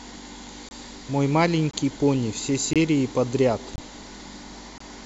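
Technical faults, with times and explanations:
0.69–0.71, 1.71–1.73, 2.73–2.76, 3.76–3.78 and 4.78–4.80 s: gap between chunks. Hard-edged silences of about 23 ms recur every 1.0 s as each chunk starts late or is padded, so the speech stutters briefly at every join.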